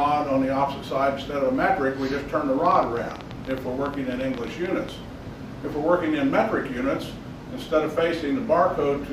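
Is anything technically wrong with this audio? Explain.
Yes. From 2.66 to 4.90 s there is a train of clicks: roughly twenty similar pulses at an uneven pace averaging about 10 per second, rising around 5 dB above the sound. They are likely from interference or a faulty connection or supply. Unlike random crackle, the ticks keep a matching shape.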